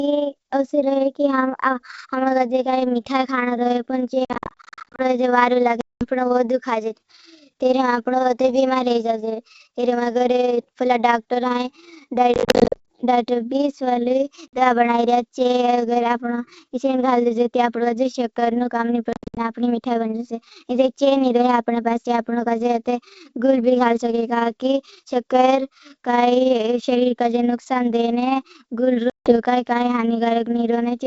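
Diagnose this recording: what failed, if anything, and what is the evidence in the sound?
Call processing: overlap-add ripple runs throughout, with the level pumping by about 6 dB around 20 times a second. This produces a rough, fast flutter, and the waveform envelope shows regular scalloping at the frame rate.

Network: packet loss on an ADPCM call leaves hard-edged silent gaps at 4.25–5.02, 5.81–6.04, 12.34–12.88, 14.48–14.62, 19.13–19.38 and 29.10–29.38 s. These appear as blank vertical stripes on a spectrogram. After each gap, the speech returns slightly distorted while the decoder's predictor resynchronises.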